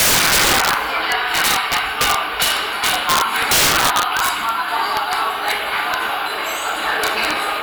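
Integer overflow runs through the whole recording of everyday sounds. The signal was pushed about 11 dB too hot, and instead of being limited, every peak beyond the integer ceiling wrapped to the opposite extreme. Around two percent of samples cross that line, so each loud moment fires a violent crack far harsher than clipping. On a waveform these show as vertical jumps from top to bottom rail; a spectrogram shows matching full-band vertical streaks.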